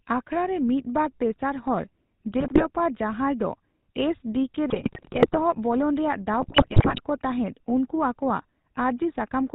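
GSM full-rate codec damage runs through the whole recording. The 13 kbps coder rebuilds the speech from a vocal-tract filter driven by a sparse, regularly spaced pulse train, discarding most of the excitation detail and everything above 4 kHz. The result is a plainly audible buzzy, gravelly roughness over every syllable, with a dull, band-limited top end.

GSM bit errors first strike from 2.4 to 2.66 s, just after "ᱢᱤᱫ ᱵᱟᱨ ᱛᱮᱥᱟᱨ ᱦᱚᱲ", then from 4.7 to 5.37 s after "ᱫᱚ ᱮᱥᱹᱰᱤᱹᱠᱮᱹᱼ", and from 6.4 to 7.01 s, just before "ᱠᱚ ᱛᱟᱦᱮᱫ ᱩᱱᱠᱩ ᱟᱠᱚᱣᱟᱜ". Corrupted filter, pitch and gain parameters reach the decoder, bending the spectrum and spiking the level frame by frame. The speech dissolves into squawks, pops and gargling. The error rate is highest in the last burst, at about 4.5%.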